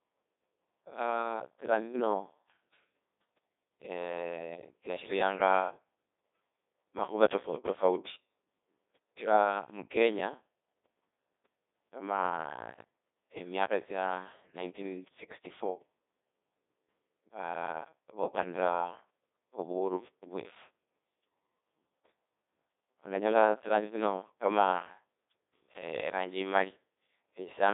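From start to finish the speech runs through a Codec 2 vocoder, and heavily: the decoder rebuilds it from sine waves using only pitch, voicing, energy and an envelope, so it comes out robotic and buzzy. The damage points to a very low bitrate, around 1.2 kbit/s. It's band-limited to roughly 250 Hz to 3.7 kHz, with nothing above 3.8 kHz.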